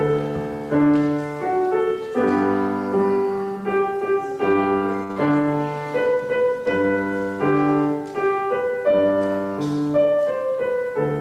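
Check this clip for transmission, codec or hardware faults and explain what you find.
Two transmission faults sit back to back just after 5 seconds, both from the network path feeding a jitter buffer.

From 5.03 to 5.11 s there is a short stall from a late packet. A packet arrived late, the buffer ran dry, and the receiver held the last sound for about 61 ms before resuming where it left off. Nothing is lost, but the sound drags briefly with a faint buzz or dip, and everything afterwards runs 61 ms later.

From 5.12 to 5.17 s comes a short concealed packet loss. About 40 ms of audio never reached the decoder in time, so the receiver extended the preceding sound to cover the gap and blended back into the real signal. It comes through as a quick smear or wobble right on the heels of the stall.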